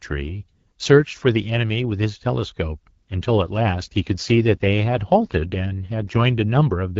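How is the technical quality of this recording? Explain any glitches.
Quality takes a dip partway through, caused by an AMR rate drop. From about 3.09 s to 6.45 s the speech turns rougher and more synthetic, with no gap and no loss of bandwidth. It's the kind of switch a network makes on a weak radio link, trading codec bits for error protection. On this AMR wideband (HD Voice) call the sound points to a fall from 12.65 to 8.85 kbit/s, until the rate climbs back up.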